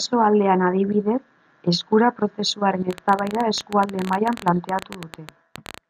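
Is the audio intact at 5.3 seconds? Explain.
No. At 5.3 seconds the speech sits inside a train of clicks running from 2.91 to 5.79 s. Uneven pops arrive about 14.3 times per second, around 40 in all, some 10 dB above the speech. Interference or a faulty connection is the likely cause.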